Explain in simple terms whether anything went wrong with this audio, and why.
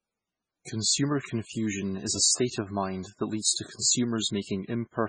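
Throughout, the speech sounds dull and muffled with nothing above 9.7 kHz, likely low-bitrate audio saved at a high bitrate, which cannot restore the lost detail.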